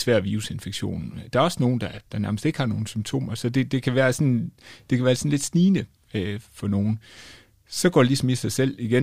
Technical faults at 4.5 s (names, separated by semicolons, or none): none